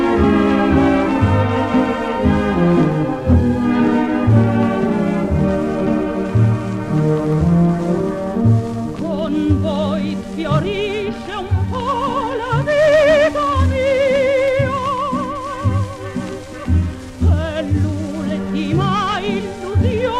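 Single sharp clicks sound at 7.33, 11.02 and 14.48 seconds. They are likely dropped samples, a fraction of a millisecond lost each time, so the waveform steps abruptly to a later value. Each one shows as a thin vertical line across the spectrogram.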